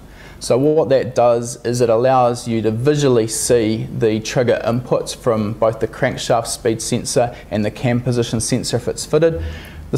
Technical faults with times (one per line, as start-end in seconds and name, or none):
0.67-0.78 short stall from a late packet
6.35-7.58 jitter buffer speed-up